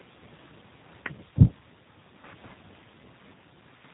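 A short speech recording carries plainly audible G.729 codec damage throughout: nothing above 4 kHz, with a rough, synthetic buzz from pulse-based excitation, which fits an 8 kbit/s stream, unlike a clean band-limit filter.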